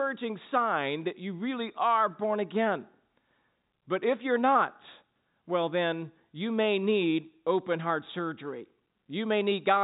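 No technical faults are audible.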